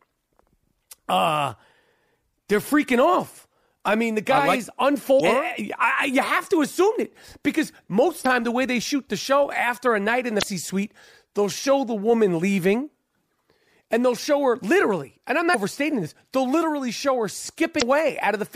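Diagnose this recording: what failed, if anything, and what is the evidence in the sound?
Damaged data in a compressed stream, at the codec and storage stage: brief glitches at 5.16, 8.22, 10.39, 15.51 and 17.78 s, each about 44 ms, where corrupted frames broke decoder sync.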